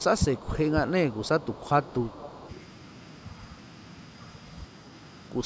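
A far end's echo canceller, likely with the call coming out of a loudspeaker, failed to remove what its microphone picked up, so this speech comes back with an echo leak: a delayed copy trailing the talker by 315 ms, around 20 dB below the direct speech from 0.00 to 0.71 s and fainter, around 25 dB down, from 1.09 to 2.53 s. It sounds like a lagging ghost of the speech, audible under a band that stops at 8 kHz from the call's microphone processing. Within those stretches the same canceller, likely unable to tell the talker from its own loudspeaker echo while both were active, turned everything down, so the speech is suppressed in double talk: between 0.18 and 0.51 s the voice dips by roughly 15 dB, and between 1.86 and 2.20 s by roughly 10 dB, each time for a fifth of a second or so in total, heard as brief sags.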